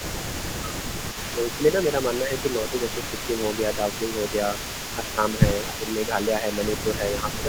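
From the start and running through to the end, an echo leak sits under the speech: a faint copy trailing by 259 ms, roughly 15 dB down. This is likely a far-end loudspeaker path the echo canceller failed to clear. On a spectrogram, each syllable's harmonics reappear as a weaker ghost shifted a quarter-second right.

Speech suppressed in double talk follows at 2.22–3.4 s, 3.77–4.23 s, 5.78–5.99 s and 6.84 s through the end. Brief patches of the voice duck by around 5 dB, and by about 10 dB near 5.8 s, likely the canceller gating the talker while the other side spoke. These show as short dips in the waveform envelope and dimmed bands on the spectrogram.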